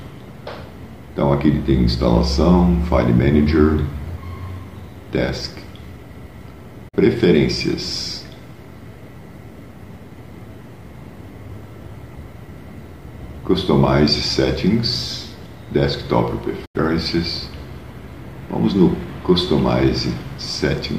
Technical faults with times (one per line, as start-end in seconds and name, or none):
6.88-6.98 digital broadcast dropout
16.65-16.80 digital broadcast dropout